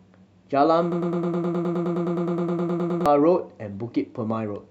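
From 0.92 to 3.06 s the speech turns into a broken-record loop: a 104 ms fragment repeats 20 times, likely a stalled player re-sending its last buffer.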